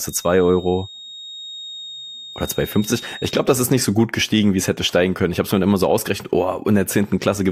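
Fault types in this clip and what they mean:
Feedback whistle: A thin, steady tone near 3.7 kHz sits about 20 dB below the speech from the start to 3.48 s, swelling and fading slowly in level, and stops just before "das ist nicht so". It likely comes from a loudspeaker-to-microphone loop held right at the edge of feedback.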